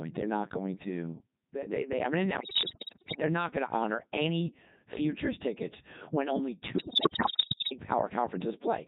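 The whole clip goes through a Codec 2 vocoder, which fits its 3.2 kbit/s mode. Only pitch, voicing, energy and envelope survive, so the speech sounds heavily robotic and buzzy. From 2.40 to 3.22 s, and again from 6.78 to 7.72 s, bit errors on digital voice radio corrupt the frames. Pitch, level and tone jump, breaking into bleeps and warbles.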